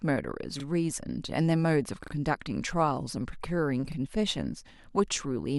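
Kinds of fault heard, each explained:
Repeated buffer: at 0.6, 2.04 and 3.92 s, late audio made the device replay its last 40 ms piece once, twice, once, as hard-joined stutters.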